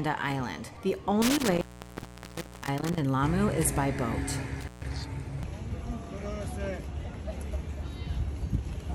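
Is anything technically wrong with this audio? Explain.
Yes. Intermittent contact at 1.22 to 2.99 s (open for about 1.02 s) and at 4.61 to 4.85 s (open 0.14 s): a loose connection briefly breaks, dropping the audio with crackle at each edge.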